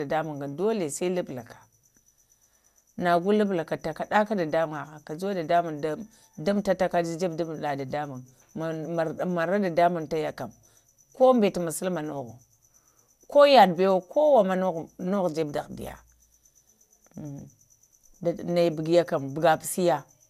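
Throughout, the speech sounds swirly, smeared and hollow, with blurred attacks and nothing above 15.8 kHz. This is likely generation loss. It points to MP2 coding at 128 kbit/s, about five passes. Each pass requantised on a new frame grid, stacking noise.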